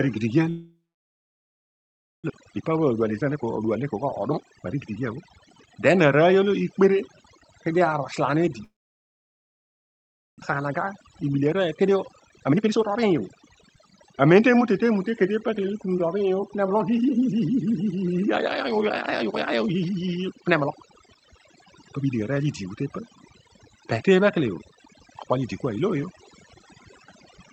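Overdone noise removal runs through the whole clip. Quiet parts of the speech vanish with the noise, leaving near silence with twinkling specks.

From 0.49 to 2.32 s there is a long network dropout, likely from lost packets. The last sound fades out, then about 1.5 s of silence. Roughly a second of speech never returns.

From 2.40 to 5.97 s a jitter buffer speed-up plays the speech at 120 % speed and the same pitch, trimming about 0.7 s of backlog. It sounds hurried.

From 8.64 to 10.44 s a second long network dropout, likely the same cause, fades into about 1.7 s of silence. About a second of speech is lost.

From 10.60 to 14.05 s a second jitter buffer speed-up runs at 121 % and removes about 0.7 s again.

Through the call path, highs stop near 8 kHz, which fits Opus at a modest bitrate.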